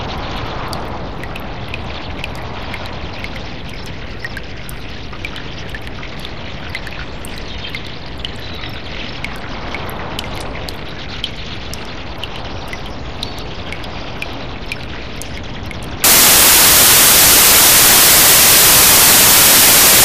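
From 16.04 s to the end of the clip at about 20 s, the everyday sounds give way to broadband noise that sits close to white noise wherever the underlying sound is loud. This is samples built from the wrong bytes. The reader assembled each sample's bytes incorrectly, whether by a one-byte offset, a swapped byte order or a wrong alignment, so the rapidly changing low-order bits ended up carrying most of each value's weight.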